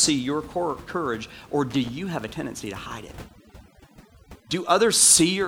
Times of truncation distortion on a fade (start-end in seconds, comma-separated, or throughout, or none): none